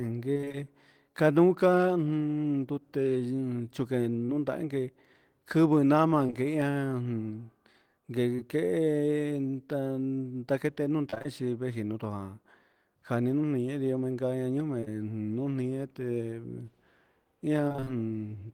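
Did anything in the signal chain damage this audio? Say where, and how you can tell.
Yes, the network is where it went wrong. There's repeated packet loss with a robotic sound at 0.33 to 0.57 s and again at 17.68 to 17.88 s: six gaps in the first stretch and five in the second, each up to about 21 to 22 ms. The receiver fills every hole by stretching the last sound, so about half of each stretch is synthetic. That's why it turns choppy and robotic.

Between 4.26 and 11.26 s you get scattered short gaps, roughly seven lost or late packets spread out, about 160 ms missing in total, with the longest around 30 ms. Only a couple of percent of that span is patched, so it stays clear apart from the odd tick or hiccup where concealment bridged a hole.

At 14.80 to 14.84 s and straight after, 14.84 to 14.88 s, there are two back-to-back cases of short concealed packet loss, each missing 20 ms. The decoder extends the previous sound and then blends back into the real audio, so you hear a brief smear or wobble.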